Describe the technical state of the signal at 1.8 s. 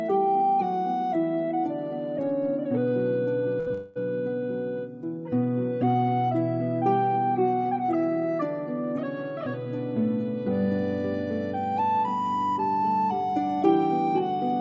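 At 1.8 s the signal is intact, with no dropout, click or distortion, and only the band limit of the call path, with nothing above 8 kHz, which fits a G.722 wideband codec.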